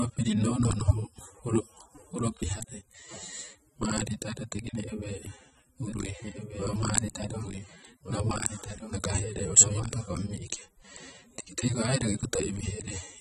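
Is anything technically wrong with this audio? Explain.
Yes, the speech carries two faults.

Throughout, nothing sounds above 13.8 kHz, and the coarse, smeared texture of a low-bitrate encode remains. This is likely low-bitrate audio saved at a high bitrate: re-encoding to a large MP3 adds almost nothing back and cannot restore what the first codec discarded.

From 5.86 to 10.26 s there is a doubled audio track: a full-band copy follows about 1.5 s behind, roughly 5 dB quieter, with no decay or room colour. It likely comes from a second capture path or misaligned edit, and it starts and stops abruptly.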